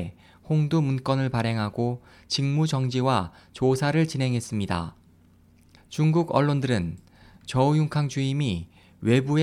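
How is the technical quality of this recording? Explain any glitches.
Nothing here trips me up; I listened all the way and didn't catch a single glitch worth pointing out.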